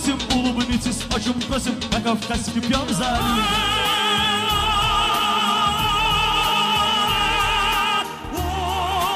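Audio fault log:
1.16–1.41 s, loud pop: two sharp pops stand a few dB above the sound, which continues beneath, likely from a brief voltage step such as a plug or switch transient.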